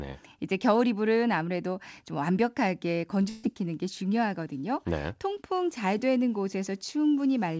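Short concealed packet loss at 3.22 to 3.25 s: a small stretch of the call's speech failed to reach the decoder in time, and the receiver covered about 15 ms of it by extending the sound it had just played before blending back into the real signal. Roughly 20 ms of actual speech is gone, heard as a brief smear or wobble in the voice.

A burst of packet loss follows at 3.29 to 3.45 s, where a run of consecutive data arrived too late or not at all. The receiver bridged the whole 140 ms gap with no silence, prolonging the last speech sound and letting it fade, so it comes across as a held buzz or thinning hiss rather than a dropout. When real audio returns, 140 ms of speech has been skipped. The surrounding call audio has nothing above 8 kHz, which fits the G.722 codec at 64 kbps.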